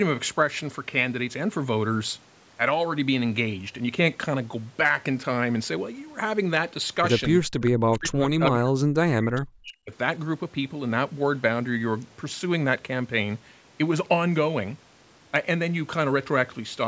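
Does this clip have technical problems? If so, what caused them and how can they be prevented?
Yes. At 7.65–7.71 s there is an echo leak: a faint, brief copy of the sound returns about 425 ms late, likely from loudspeaker pickup the far end's canceller missed. Its distinct delay separates it from room reverberation. Prevent it with headsets or better acoustic echo cancellation at the loudspeaker end.

From 7.76 to 9.92 s the speech is suppressed in double talk, dipping for about 2 seconds and dropping very deep, likely while both sides talk. It follows overlapping speech, unlike network dropouts. Prevent it with double-talk-aware echo cancellation, or by using headsets so less suppression is needed.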